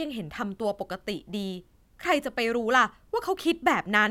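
A speech recording with no technical faults to report.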